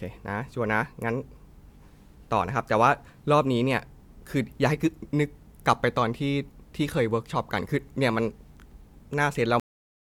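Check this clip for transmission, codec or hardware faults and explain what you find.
One fault stands out, a cut-off end. At 9.6 s the speech stops mid-sound and drops straight into digital silence with no decay, because the final buffers were never written or played out.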